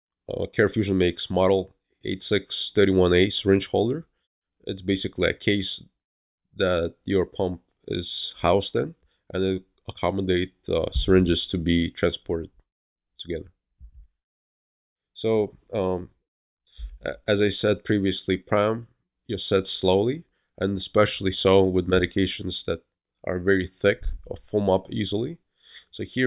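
No technical faults are audible anywhere in the recording.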